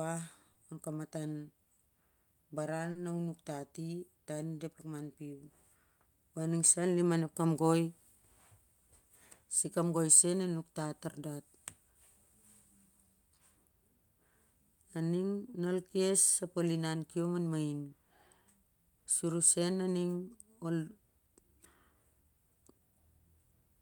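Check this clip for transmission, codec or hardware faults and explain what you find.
Two short concealed packet losses occur. At 0.53–0.57 s about 20 ms went missing, and at 2.91–2.97 s, just before "na u", about 40 ms. Each time the receiver extrapolated the preceding sound to bridge the gap, leaving a brief smeared, wobbling patch.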